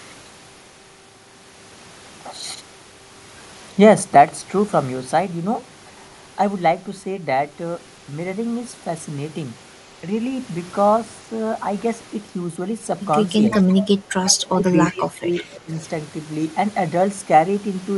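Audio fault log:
13.5–13.83 s, 14.25–14.35 s, 14.7–14.93 s and 15.35–15.59 s, echo leak: A faint delayed copy of the speech appears 343 ms behind it. It sits roughly 10 to 20 dB below the talker. The likely cause is a far-end echo canceller letting loudspeaker pickup through.
13.62–13.67 s and 14.48–15.72 s, speech suppressed in double talk: The speech dips briefly, then for about a second. The drop is roughly 10 dB, then 15 dB. Both sides likely talked at once, and the canceller turned down the talker along with the echo.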